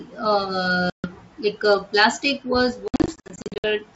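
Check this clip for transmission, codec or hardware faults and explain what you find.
Two bursts of packet loss on an ADPCM call break up this speech. From 0.90 to 1.12 s, about 140 ms goes missing, which fits roughly seven packets. From 2.88 to 3.67 s, about 420 ms is lost in scattered gaps over 760 ms, the longest run 60 ms. Each gap is filled with hard silence, and the decoder's predictor and step size drift from the sender's. Speech therefore comes back slightly distorted before settling. That mistracking recovery sets it apart from a plain dropout or a concealed loss. The G.722 wideband coding itself sounds clean, consistent with the full 64 kbit/s mode.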